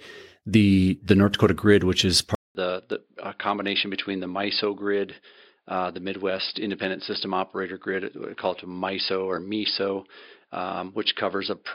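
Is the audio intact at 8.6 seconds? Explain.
No, the input likely switched to a poorer device at 2.35 s, after "grid which is", so from a 200 ms gap to the end the speech sounds duller, cut above 5 kHz, and quieter.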